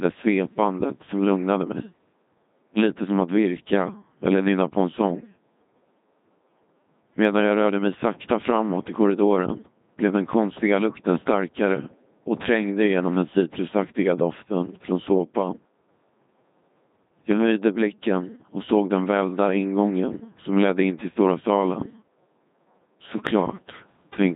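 From start to finish, the speech has passed through the Codec 2 vocoder. The damage is heavy. Nothing of the original waveform survives. The decoder rebuilds each sound from sine waves driven by pitch, voicing, energy and a rough spectral shape. The result is robotic and buzzy, with a synthetic tone. The coarse detail fits a rate around 2.4 kbit/s. Nothing is heard above 3.8 kHz, so the top end is missing.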